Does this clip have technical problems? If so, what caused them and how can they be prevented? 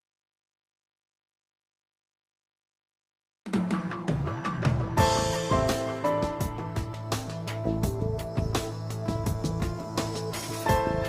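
No, there are no technical problems in this clip. It was carried over a call path whose codec limits the top end to around 12 kHz, which fits Opus at a moderate bitrate.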